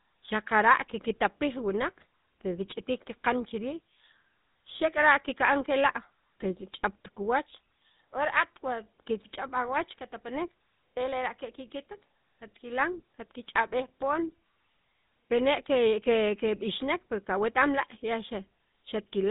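Throughout, the speech has a buzzy, gravelly roughness with nothing above 4 kHz, the mark of the GSM full-rate codec, whose sparse pulse excitation fits its 13 kbps rate.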